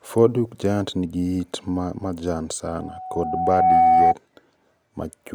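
Loudspeaker feedback squeal starts at 2.67 s, just after "yiit ma majan", and lasts until 4.15 s. The microphone hears its own loudspeaker. Loop gain passes unity at 748 Hz. That tone swells over about a second, ending roughly 10 dB above the speech.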